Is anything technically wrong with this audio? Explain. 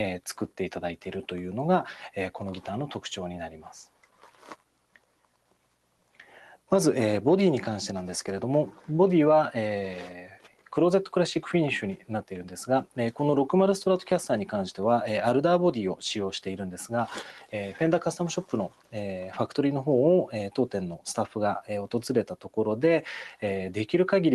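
Yes, there are two related problems, both from a speech-style noise suppressor that was left running on material it wasn't built for. The top end also stops around 12 kHz, which fits the call codec the sound went through. That cutoff is expected for this path.

Noise suppressor applied to music or sounds: This runs through the whole clip. The suppressor keeps deciding that steady, sustained parts of the sound are background noise and turns them down, then lets them back up when something sharper arrives. The level keeps swinging by around 5 dB. Attacks punch through while anything held or decaying sinks, so the sound pumps and flutters and feels thinner than it should.

Sound cut by the noise suppressor: In five places the suppressor clamps down much harder, by about 11 to 12 dB. These are 3.86–6.18 s, 10.21–10.73 s, 11.96–12.31 s, 18.69–18.94 s and 22.32–22.52 s. The first is the biggest, with roughly a second and a half of it pulled down. 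There the gate reads a sustained or fading stretch as pure noise and ducks it hard. You hear the sound drop away or its tail get chopped short, then recover once a sharper onset comes through.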